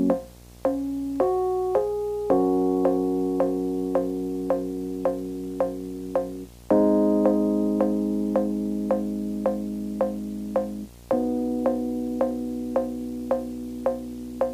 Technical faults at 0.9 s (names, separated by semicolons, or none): video or display buzz